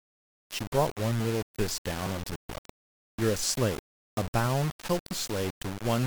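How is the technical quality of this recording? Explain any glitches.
The technical quality is poor. The speech carries grainy distortion from start to finish. This is low bit depth without dither. The audio was likely rounded to very few levels, which fits about 4 bits. The error tracks the voice, sitting only about 10 dB below it. Quiet syllables turn gritty, and the softest moments sputter or drop out.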